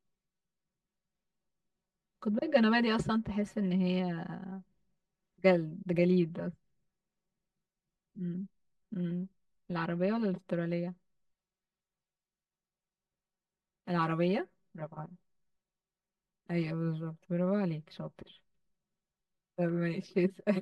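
Throughout the speech, there is channel delay (comb filtering). One channel arrives roughly 5 ms late, and the two are summed to mono. Shared content cancels at evenly spaced frequencies, starting near 100 Hz. The speech sounds hollow and phasey.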